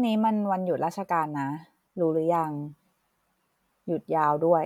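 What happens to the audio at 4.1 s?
Nothing goes wrong at 4.1 s; the speech plays through that moment intact, with no fault to be heard.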